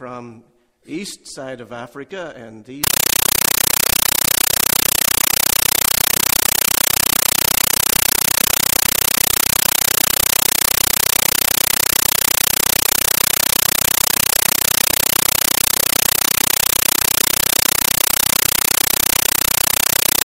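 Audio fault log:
2.84–20.26 s, compressed stream played as audio: from 2.84 s to the end, the sound is replaced by very loud, harsh static that chatters at a steady 31.25 bursts per second, each burst about 9.33 ms of noise followed by silence. The packed data of an undecoded bitstream, which fits AC-3 at 448 kbps, is being read as ordinary samples. Unlike dropouts or clipping, none of the original sound survives beneath the noise, and the rhythm never varies.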